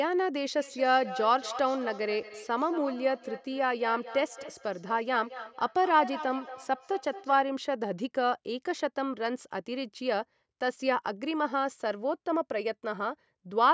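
From 0.58 to 7.52 s, feedback echo between two devices: speech loops back through the other device every fifth of a second or so, thin and ringing, about 13 dB down.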